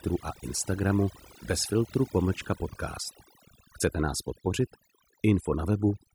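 Throughout the speech, the background drops to near silence dotted with twinkling specks. This is overdone noise removal: the reducer, set too strong, pulled individual frequency bands down whenever they sat near its noise estimate, taking quieter vocal detail with them.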